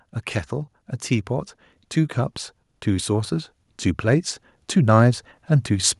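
From 2.14 s to 5.16 s the automatic gain rises: the control treats the level as too low and raises gain by about 5 dB over three seconds. The background noise swells with the voice, which tells it apart from a speaker simply talking louder.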